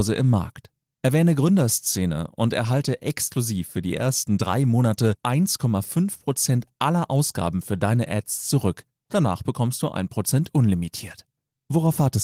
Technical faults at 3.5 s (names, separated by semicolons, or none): none